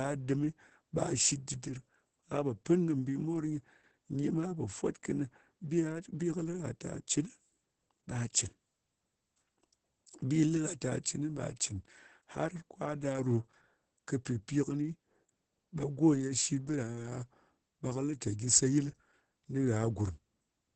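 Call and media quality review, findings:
Opus voice compression, throughout the speech. Muffled, hoarse, slightly robotic timbre; nothing above 8.7 kHz. Low-rate SILK linear-prediction coding with a wideband cap and coarsely quantised excitation, consistent with roughly 10 kbps and 20 ms frames. Heavy codec damage.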